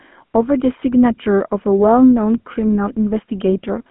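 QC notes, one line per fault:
Throughout: GSM full-rate codec. Plainly audible buzzy, gravelly roughness on the speech. A vocal-tract model driven by sparse, regular pulses discards fine excitation detail. The band spans roughly 200 Hz to 3.4 kHz, nothing above 3.8 kHz, fitting a 13 kbps phone channel.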